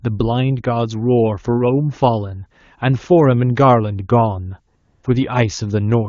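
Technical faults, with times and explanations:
4.75 to 5.03 s, AMR comfort noise: for 280 ms the phone stopped sending speech frames, so the receiver filled the gap with synthetic noise built from a rough level and spectrum estimate. Unlike a dropout's dead silence, the real background gives way to smooth, steady hiss, while the surrounding wideband speech stays clean.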